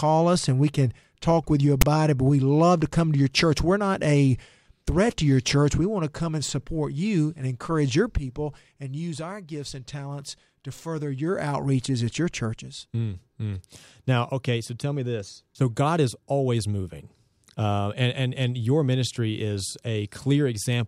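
Just after "can talk with you", at 1.81 to 1.83 s, file tags are played as audio: text tag bytes read as samples give a short, hard-edged, offset rasp, then zero padding drops to silence.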